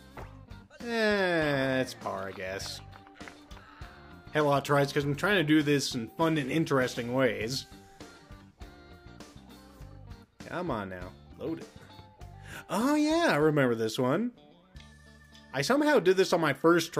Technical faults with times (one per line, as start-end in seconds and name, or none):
none